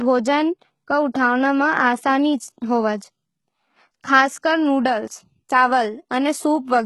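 From start to finish the speech carries heavy codec damage, most likely from HE-AAC compression at a very low bitrate. Nothing reaches past about 11.8 kHz, and the treble below that cutoff doesn't sound like the real thing. It's been rebuilt by copying lower bands upward and shaping them loosely, so the harmonics don't line up across the join. That's why the s sounds come out gritty, metallic or lispy.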